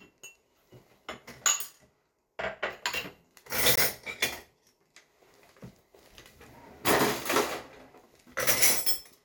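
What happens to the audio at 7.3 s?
Nothing goes wrong at 7.3 s; the sound plays through that moment intact, with no dropout, click or distortion.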